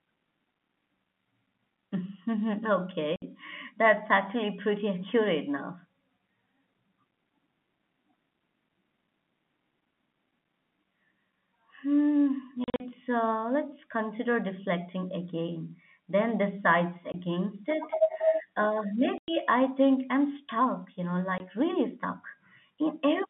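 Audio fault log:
3.16–3.22 s, 12.64–12.80 s, 17.12–17.14 s, 19.18–19.28 s, 21.38–21.40 s: packet loss filled with silence. The speech drops out completely for 60, 120, 20, 100 and 20 ms. At 12.64 s the 120 ms of gaps are scattered over 160 ms, with no single hole longer than 40 ms. Every gap is a multiple of 20 ms, which fits 20 ms packets being lost and replaced by silence. The cuts at each edge are abrupt within the narrow telephone-band audio.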